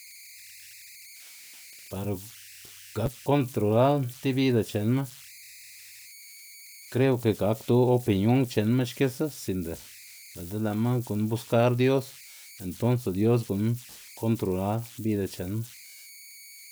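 A whistle somewhere around 2 kHz runs through this speech recording from start to finish. It stands out in the pauses and turns into a grainy hiss under the quieter passages, sitting only about 23 dB below the speech. These are converter idle tones: an undithered delta-sigma converter, fed a very small input, locks into repeating bit patterns, and those patterns produce a tone whose pitch follows the input's offset.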